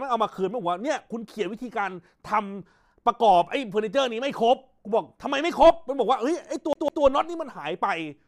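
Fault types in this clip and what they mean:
CD stuck on one turn: near the end, from 6.73 to 7.04 s, the same 154 ms slice of speech plays twice in a fast, even stutter with a brief mute at each jump, as a scratch throws the laser back one track per disc revolution.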